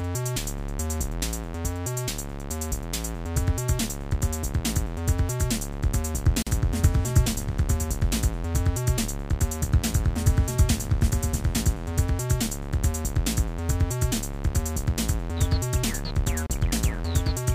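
At 6.42 s the sound drops out for about 43 ms, then resumes where it left off. At 16.47 s it happens again, for about 31 ms. These are gaps at a join of encoded pieces, ten seconds apart. The audio was encoded in separate chunks and butted together untrimmed. Each chunk's encoder start-up delay and final-frame padding survive as silence. The edges are smeared by the codec.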